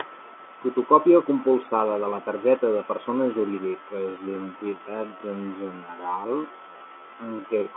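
From 3.58 s to the end of the clip, a time-stretched section sets in. Software likely stretched this part of the speech to fill a longer slot, running it at about 0.52 times its original speed and holding the pitch by repeating short fragments of the waveform. The pace drops abruptly to roughly half while the pitch stays put, and the speech drags, with syllables dragged out, still inside the narrow band of the G.711 telephone line.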